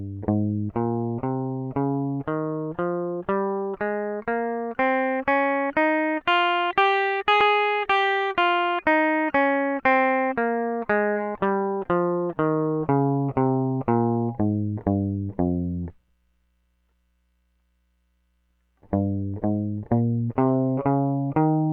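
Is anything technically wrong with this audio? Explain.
Yes. At 7.41 s the music has damaged data in a compressed stream: corrupted bytes make the decoder misread a frame and resynchronise, giving a brief glitch.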